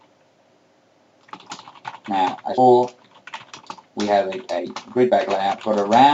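At 2.57 to 2.68 s there is a skip ahead. A stretch of audio was dropped while later audio was already waiting, so roughly 0.7 s of sound never plays and the two sides of the cut are joined almost directly, with no silence or filler. Unlike a dropout or concealed packet loss, nothing stalls or smears. The sound simply jumps forward, and the delay shrinks by about the same amount.

Jitter buffer speed-up follows twice. From 3.15 to 3.66 s the audio runs at 110% speed, and from 4.36 to 6.04 s at 114%. The receiver trims short pitch-period-sized pieces over and over to bring its delay down, removing around 50 ms in the first stretch and about 200 ms in the second. The sound becomes hurried while its pitch stays the same. That separates it from a sample-rate or clock mismatch, which would also shift the pitch, and from a skip, which removes one block at once rather than shaving time continuously. 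Throughout, the band-limit near 8 kHz comes from the call codec.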